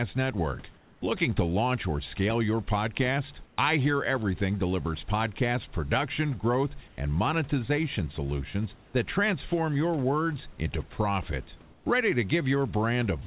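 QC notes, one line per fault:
0.74–1.02 s, 3.46–3.58 s, 6.88–6.98 s, 8.86–8.94 s, 11.62–11.86 s: comfort noise in place of the background. In these pauses the room's natural noise turns into a flat, even hiss, about 2 to 4 dB quieter. The sender likely stopped transmitting during silence. The receiver then filled each gap with synthetic noise.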